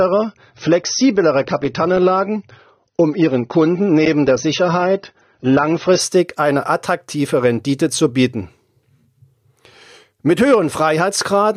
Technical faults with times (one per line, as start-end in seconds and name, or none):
0.00-6.00 adaptive stream starting at a low bitrate